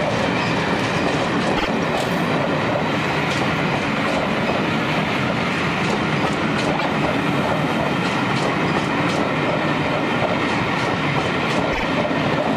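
Repeated frames stutter the audio at 1.56, 6.78 and 11.72 s: a 52 ms block, fitting two compressed frames, plays again twice, once, then twice.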